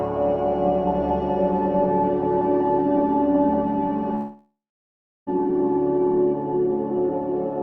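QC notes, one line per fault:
4.15–5.30 s, long network dropout: the incoming stream stops for about 1.1 s, and the receiver stretches the last sound into a fading fill. Within a few tenths of a second this gives way to near-silence for roughly 0.7 s. The audio then resumes with the lost stretch gone, which is likely a network outage rather than a source fault.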